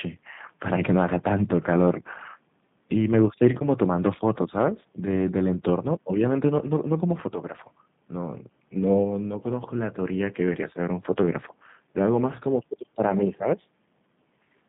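Throughout, the speech sounds rough, slightly synthetic and cut off above 4 kHz. This is plainly audible G.729 codec damage, which fits 8 kbit/s VoIP coding that rebuilds speech from a filter and sparse pulses.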